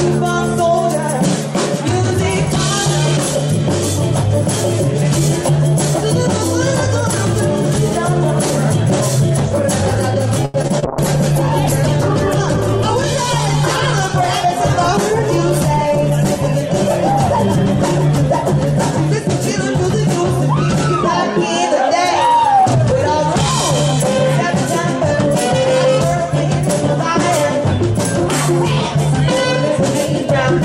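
From 10.45 to 10.84 s the audio turns choppy and robotic, with four short holes, the longest about 87 ms, each papered over by stretching out the sound just before it. This is repeated packet loss: packets kept arriving late or not at all, and the receiver filled each gap by extending the last good audio. About 38% of that stretch is patched rather than real. From 10.86 to 20.84 s the sound turns rough, watery and dulled, with the top end missing. That points to a call bitrate drop, where the encoder was pushed from around 128 kbps down to about 15 kbps. At such a low rate Opus quantises far more coarsely and discards the high frequencies. The worst of it holds for roughly 5.7 s before quality recovers by 20.84 s.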